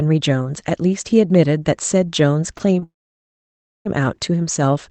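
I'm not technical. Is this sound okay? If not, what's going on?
No. Short concealed packet loss at 2.57 s and 2.79 s: a few hundredths of a second never arrived in time, so the call software patched each gap, leaving a brief smear or wobble. A long network dropout follows from 2.83 to 3.87 s. The sound cuts out for about a second, and nearly all of it is silent. That stretch is simply lost, most likely because the connection stalled.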